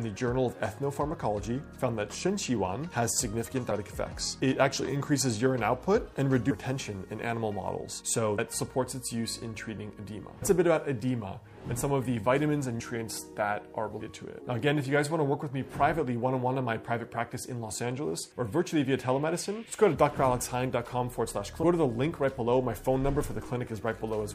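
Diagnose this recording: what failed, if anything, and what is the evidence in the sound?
Compressed frames skipped at the decoding stage: whole 26.1 ms frames were missing or rejected. The audio jumps forward at 3.70, 6.49, 8.38, 10.41, 12.79, 13.99 and 21.62 s, losing anywhere from under a tenth of a second to about 0.7 s each time.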